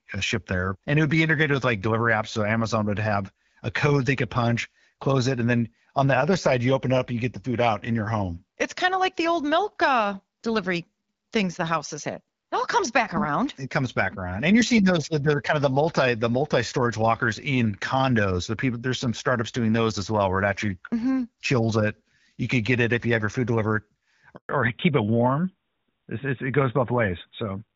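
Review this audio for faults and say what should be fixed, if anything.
The speech cuts out abruptly for 140 ms, from 24.35 to 24.49 s: a handover gap, where the call switched networks and no speech frames arrived during the transfer. Tuning the network to prepare the target link before switching would shorten or remove this gap.

From 24.49 s to the end, the speech turns duller and rougher, with nothing above 4 kHz. This is a fallback to narrowband: after the handover, the call dropped from the AMR wideband (HD Voice) codec, which before the switch sounds like its 12.65 kbit/s mode with light coding damage, to AMR narrowband at about 12.2 kbit/s. Making sure the new network supports wideband and negotiates it during handover would keep HD Voice in place.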